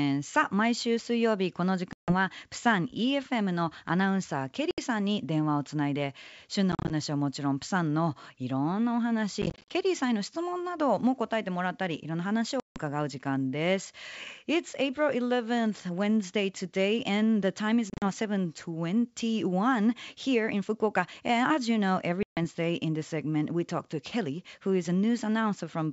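Speech over a wideband G.722 line, clear up to about 7 kHz with a light upper-band hiss, suffers packet loss on an ADPCM call at 1.93–2.14 s, 4.71–4.79 s, 6.72–6.92 s, 9.42–9.72 s, 12.60–12.79 s, 17.90–18.08 s and 22.23–22.40 s. Solid gaps of 70 to 160 ms appear at 1.93, 4.71, 12.60 and 22.23 s, while at 6.72, 9.42 and 17.90 s the loss is scattered in runs of up to 40 ms. The missing audio is filled with silence, so the waveform drops abruptly to a flat line and the spectrogram shows sharp-edged vertical blank strips. The receiving decoder's predictor and step size lose track of the sender's, so each gap ends with brief slight distortion that settles within tens of milliseconds.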